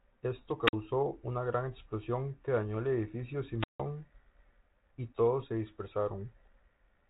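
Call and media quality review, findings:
Brief hiss swell, then near-silent holes at 0.64–0.73 s (47 ms mute, before "una gran explosión que") and 3.59–3.80 s (161 ms, after "que dañó el edificio"). Wireless microphone squelch dropout: RF fade, receiver squelch muting output. G.726 path audible as band limit near 3.9 kHz.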